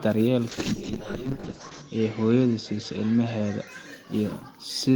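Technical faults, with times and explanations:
0.55–3.73 s, call bitrate drop: the speech coarsens into a rough, watery sound and loses everything above 8 kHz, worst for about 1.3 s, which fits the encoder being pushed from about 32 to 7 kbps. Unlike packet loss, the sound never breaks off.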